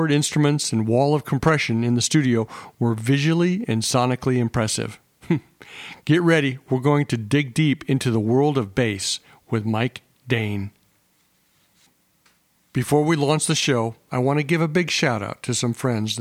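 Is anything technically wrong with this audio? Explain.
No, nothing is technically wrong with this audio.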